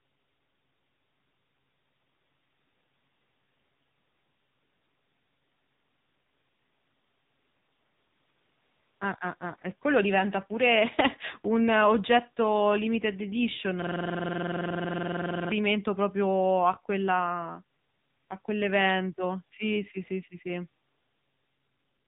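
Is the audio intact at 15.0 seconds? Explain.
No. At 15.0 seconds the audio is caught in a system hang loop that runs from 13.82 to 15.52 s. The machine stalled while the playback hardware kept cycling through the same ring buffer, so one 46 ms slice of sound repeats exactly. That length fits a 2048-sample buffer. Cycling at about 21.5 Hz, the repeats fuse into a rapid, mechanical machine-gun stutter rather than a steady buzz, and the sound stops moving forward until 15.52 s.

The looped slice also carries the AMR narrowband mobile codec damage present throughout. Encoding at 6.7 kbps strips everything above 3.8 kHz and rebuilds the speech from a sparse vocal-tract model. The result is a muffled, buzzy, synthetic tone, and it is frozen and repeated along with the stutter.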